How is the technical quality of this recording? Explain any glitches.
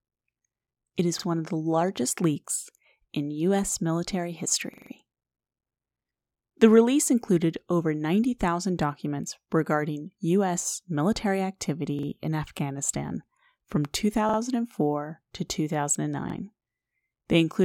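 The speech is marred by six stutters from a repeated buffer, at 1.20 s, 4.74 to 4.91 s, 6.23 to 6.32 s, 11.99 to 12.08 s, 14.29 to 14.38 s and 16.30 to 16.34 s. Each time, fresh audio arrived late and the device replayed its last block, a piece about 43 ms long, which fits a 2048-sample buffer. It plays once more at 1.20 and 16.30 s, twice more at 6.23, 11.99 and 14.29 s, and four times more at 4.74 s. The hard joins give a rapid, machine-like stutter. Unlike a dropout, there is no silent gap, and hardly any speech is lost.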